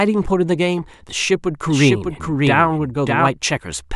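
A second capture path, likely running slower than the main one, mixes the same speech back in from 1.68 s to 3.28 s, giving a doubled audio track. The copy trails the original by roughly 0.7 s at about 5 dB lower, with the full bandwidth intact and no decay or room colour, so it sounds like a clean overlapping repeat rather than an echo. It cuts in and out abruptly at both boundaries.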